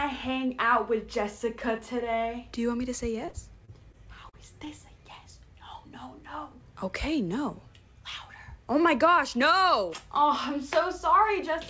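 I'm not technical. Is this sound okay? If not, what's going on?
No. From about 3.26 to 4.68 s the sound turns choppy and robotic, with a handful of tiny pieces missing, none longer than about 39 ms. This is repeated packet loss (robotic sound). During this stretch of the call, small chunks of audio kept arriving late or not at all. Each time, the system filled the hole by stretching out the last bit it had, and then the next hole came right after.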